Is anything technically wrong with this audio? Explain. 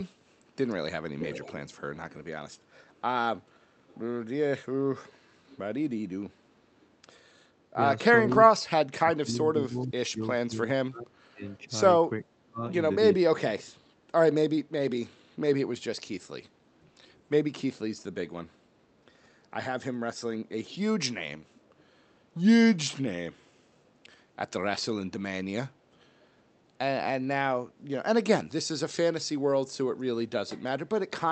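Yes. Echo leak shows up at 1.19–3.99 s, where a copy of the speech trails about 418 ms behind at roughly 10 dB down, then fainter scraps at 5.07–5.57, 6.8–6.91, 21.55–21.83 and 23.85 s. Likely a far-end loudspeaker whose echo canceller let some of its mic pickup back into the call.

Between 7.76 and 13.6 s there's speech suppressed in double talk: the voice dips and breaks up in pieces, about three seconds in all, dropping as much as roughly 35 dB. Likely both sides talking at once, so the canceller muted everything it couldn't separate.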